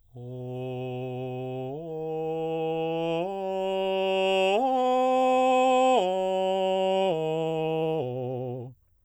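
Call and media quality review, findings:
Time-stretched section, 6.73 s to end: music abruptly rushes to 1.54x pace, pitch unchanged. Likely cause: stretch software dropping short segments to shorten the passage.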